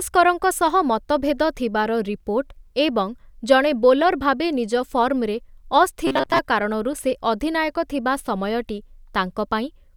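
From 6.07 to 6.39 s, the speech turns into a rigid, metallic buzz near 133 Hz. This is robotic sound from repeated short buffers. Most of that stretch is likely the same 7.5 ms slice looped while new audio failed to arrive. Normal speech returns at "କାରଣରୁ ସେ ଅଧିନାୟକ ଥିବା".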